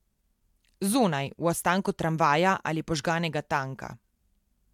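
No technical faults are audible.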